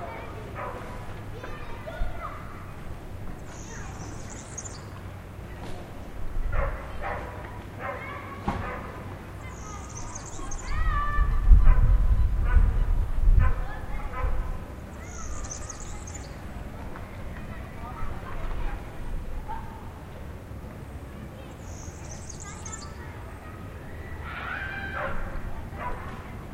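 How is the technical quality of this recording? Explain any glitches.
The recording holds up well, with no glitches to explain. Nothing in the audio calls for comment on its technical side.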